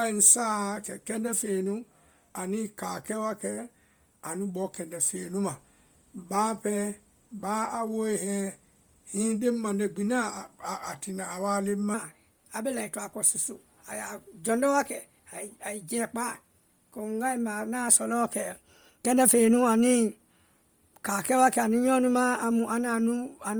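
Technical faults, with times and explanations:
Throughout: Bluetooth LC3 compression. The speech has a breathy, grainy edge, with hiss standing in for upper detail. This is likely heavy low-bitrate coding that blanks upper bands and fills them with noise, which fits LC3 at 32 kbps with 10 ms frames.
11.94 to 23.59 s: section at the wrong speed. From 11.94 s to the end, the speech runs 1.14 times fast and sits about two semitones high, with tempo and pitch rising together. This is likely playback or editing against the wrong clock, shifting both at once.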